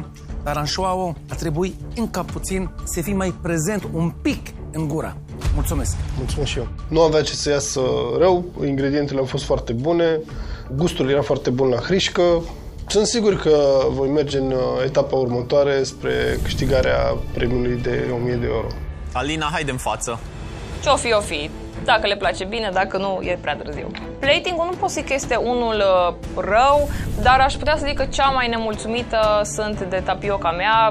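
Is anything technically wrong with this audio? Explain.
No, nothing technically wrong turns up anywhere in this audio, so there's nothing here to flag.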